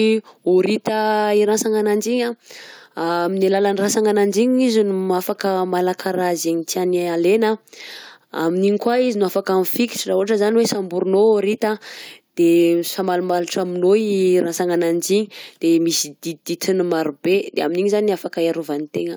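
Nothing in this speech recording stood out as a technical problem on listening.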